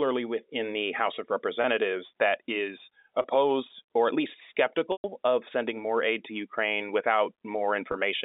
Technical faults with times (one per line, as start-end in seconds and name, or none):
1.62-1.64 packet loss with pitch repetition
3.22-3.24 packet loss with pitch repetition
4.92-5.04 packet loss with pitch repetition
7.92-7.94 packet loss with pitch repetition